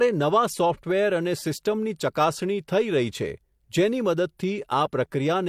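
Speech that has likely been through transcoding between lossy codecs, an MP3 stage then HE-AAC, leaving stacked artefacts throughout, with content ending near 20.2 kHz.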